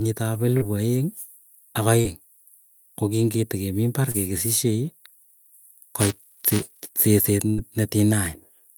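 A speech recording with three kinds of network and playback fault. Short concealed packet loss hits at 0.57–0.63 s, 2.01–2.18 s and 4.11–4.16 s, with about 40, 40 and 20 ms missing. Each is a brief smear or wobble where the decoder extended the preceding sound and blended back, so the speech keeps flowing rather than breaking. Buffer tearing runs from 6.00 to 6.89 s as a robotic buzz at 345 Hz, which fits a 128-sample buffer. In each period a small slice, a few percent, replays audio a few milliseconds old between hard joins. Its steady rate, lasting as long as the speech does, sets it apart from one-off concealment glitches. A burst of packet loss at 7.50–7.60 s removes 80 ms. The last sound is stretched and fades as a held buzz or hiss, then speech resumes further on, a longer, audible gap compared with the short losses.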